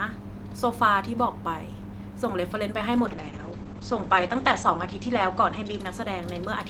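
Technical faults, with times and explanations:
2.97–6.70 s, call bitrate drop: audio bandwidth narrows from about 20 kHz to 8 kHz and the speech turns muffled and coarse, with a rough, watery texture. The sound fits an encoder that has been told to cut its rate from around 32 kbps to about 9 kbps after the call's bandwidth estimate fell. With so few bits, the codec quantises more coarsely and discards high frequencies. The worst stretch lasts about 1.51 s, and the quality has not recovered by the end of the clip.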